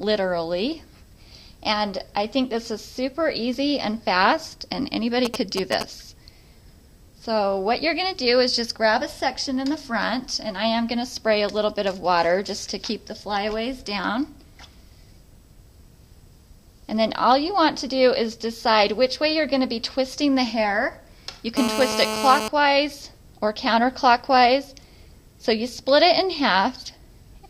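A nearby 2G handset exchanging short signalling bursts with its network had its radio pulses rectified by the audio circuit. From 5.25 to 5.83 s this produces GSM signalling bursts: a galloping dit-dit-dit of brief 217 Hz buzzes, only slightly quieter than the main sound.

From 21.57 to 22.48 s a phone in an active call transmits continuously at 217 bursts per second, and the circuit again demodulates the pulses. The result is GSM phone buzz: a steady, hard, raspy 217 Hz tone rich in harmonics, about 4 dB below the signal and unrelated to it.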